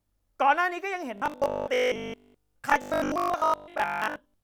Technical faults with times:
1.18-4.43 robotic sound from repeated short buffers
2.16-2.34 Bluetooth stutter

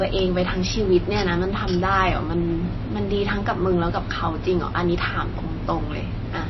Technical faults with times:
0.00-6.49 MP3 compression

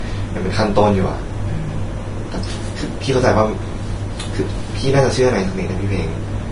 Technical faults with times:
0.00-6.52 Vorbis compression

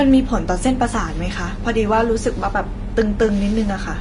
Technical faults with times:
0.00-4.01 Vorbis compression

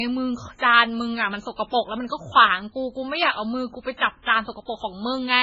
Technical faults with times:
0.00-5.42 MP3 compression

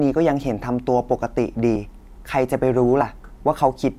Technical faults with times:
1.75 compressed frames skipped
3.01 compressed frames skipped

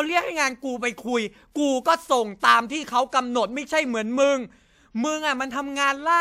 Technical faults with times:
2.39-2.43 pre-echo

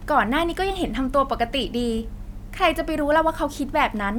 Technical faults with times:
none

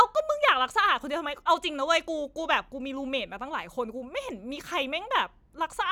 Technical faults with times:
none

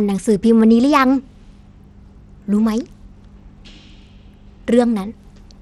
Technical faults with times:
0.00-5.62 Bluetooth SBC compression

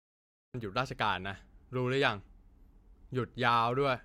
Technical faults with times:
0.00-0.54 cut-off start

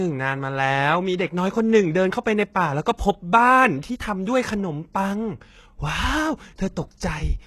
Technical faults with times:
0.00-7.46 HE-AAC compression
1.18 pre-echo

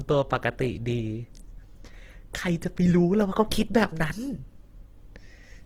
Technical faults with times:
0.00-5.65 Opus compression

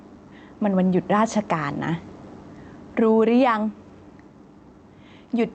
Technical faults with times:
0.00-5.55 gain pumping

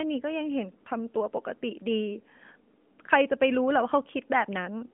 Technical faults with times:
none

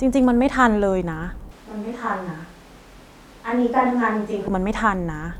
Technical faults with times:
1.51-4.47 switch to a distant microphone

